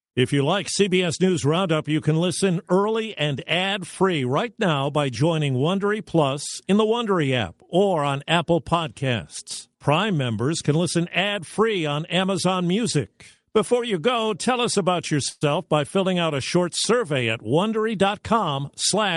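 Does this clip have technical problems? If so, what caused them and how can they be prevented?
Yes. A call audio freeze at 15.29 to 15.43 s, between "go tell us about" and "by filling out a", stretches the last sound into a fading fill for 118 ms. Nothing is lost, but the audio resumes late. The likely cause is packets held up in transit, which emptied the jitter buffer. A steadier network path or a deeper jitter buffer prevents this.

A jitter buffer speed-up from 17.45 to 18.95 s, right after "a short survey at", makes the speech run at about 107% speed with unchanged pitch. The receiver trimmed roughly 100 ms of pitch-period slices to drain a backlog of late packets. Reducing network jitter prevents the backlog that triggers this.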